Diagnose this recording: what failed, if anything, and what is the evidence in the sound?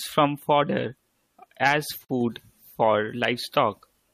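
The failure is at the codec stage, where separately encoded pieces were joined. It is a gap at a join of encoded pieces. The speech stops at 2.05 s and resumes at 2.09 s, leaving a gap of about 44 ms. Both edges are smeared. The sound then carries on exactly where it left off, with nothing lost. The join kept each piece's encoder start delay and last-frame padding instead of trimming them.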